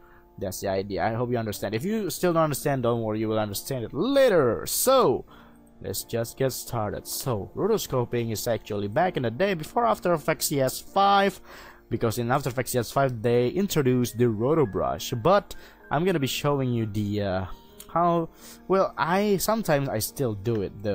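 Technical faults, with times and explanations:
6.53 to 8.53 s, adaptive stream at a lower bitrate: for about two seconds the quality suddenly drops, with more codec smearing, then snaps back with no gap. That's the player dropping to a leaner encode, which sounds like Opus falling from roughly 64 to 16 kbit/s.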